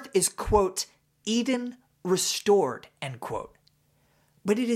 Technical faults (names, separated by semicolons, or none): none